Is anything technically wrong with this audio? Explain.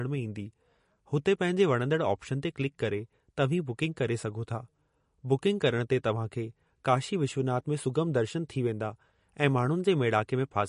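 Yes, there's a problem running through the whole clip. The speech sounds watery and swirly, with nothing above about 10.6 kHz. That's likely MP3 compression at a bitrate low enough to fit roughly 40 kbps, where the encoder drops the treble and lets weak detail flicker between frames.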